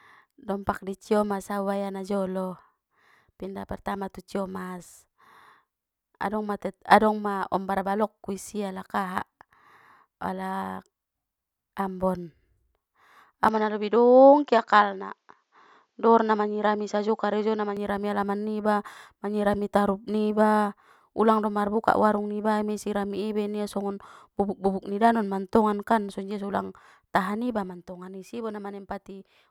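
From 13.48 s to 17.77 s the speech turns duller, with nothing above 7.6 kHz and faint new background noise, starting just before "alaman niba manyirami tarup", then clears. There is no gap at the switch and no level jump. The likely cause is an input switched to a poorer device: a plain low-pass filter would not bring its own noise floor.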